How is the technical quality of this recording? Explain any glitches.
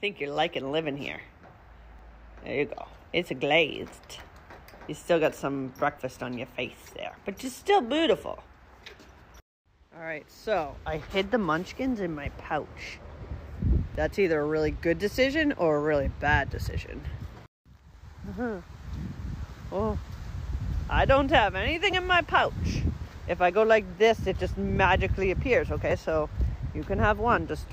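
The recording has one recurring glitch. Audio missing between chunks: brief skips at 1.99, 9.96, 13.95, 17.94, 21.93 and 25.91 s, each losing about 15 ms, likely from 4-second processing chunks dropping audio at each handover.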